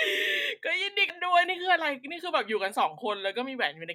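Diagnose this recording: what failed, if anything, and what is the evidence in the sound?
A CD skip during playback: the laser jumped tracks at 1.09 s, causing a tick and a very short mute before the speech resumes from a different point.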